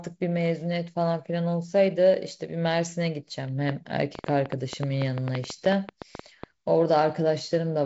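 From 3.69 to 6.44 s there's a train of clicks, around 20 uneven pops at roughly 7.7 per second, poking well above the speech and likely caused by nearby interference.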